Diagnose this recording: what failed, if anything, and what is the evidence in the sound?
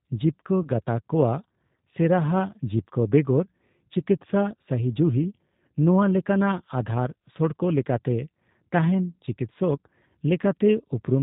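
The codec stage is the main culprit: this is G.729 coding, with the rough, slightly synthetic texture typical of 8 kbit/s. Speech is rebuilt from a vocal tract filter plus a few pulses per frame, and nothing above 4 kHz survives, so the damage is plainly audible throughout.

There's also a network hiccup: VoIP packet loss concealed by the speech codec, from 0.63 to 0.69 s. The decoder patched the gap by extrapolating its last pitch and filter, leaving a brief stretched, fading sound that fits a single lost 10 ms frame, and the speech stays weak or distorted for tens of milliseconds as the decoder settles back.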